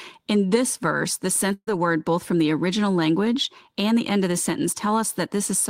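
A burst of packet loss hits the speech from 1.53 to 1.69 s. Several consecutive packets never arrived in time, so the receiver papered over the hole by extending the last sound it had for about 135 ms, turning it down as it went until the final 50 ms or so are silent. The result is a brief held buzz or hiss that fades out, after which the speech resumes with roughly 140 ms of it simply gone.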